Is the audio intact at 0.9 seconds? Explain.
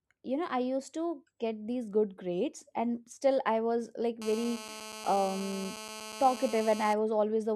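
Yes, the speech at 0.9 seconds plays through intact, with no audible fault at that moment.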